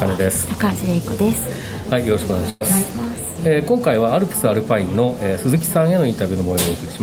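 The audio has one burst of packet loss, from 2.49 to 2.63 s. A run of packets never arrived in time to be played. For about 111 ms the receiver stretches the last sound it had and lets it fade. A brief silence of about 10 ms follows. Playback then resumes further on, so about 120 ms of the original audio is simply missing, and the join sounds like a small skip forward.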